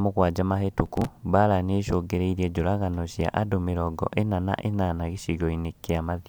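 From 0.86 to 1.09 s a gritty burst of crackle tears across the speech, then stops. This is processor overload crackle: the processor fell behind and missed a run of around fifteen short buffers, each about 5 ms, skipping them and leaving hard-edged gaps.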